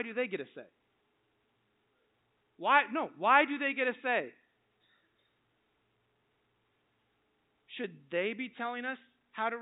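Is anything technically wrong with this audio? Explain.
No, nothing here is a fault: the speech comes through standard G.711 telephone coding, which is why nothing above about 3.8 kHz is heard, and that is simply how a normal phone line sounds.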